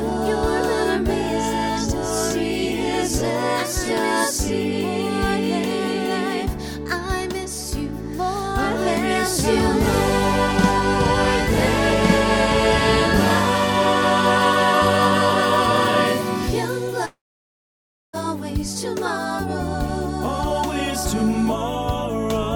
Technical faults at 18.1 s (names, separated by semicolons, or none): long network dropout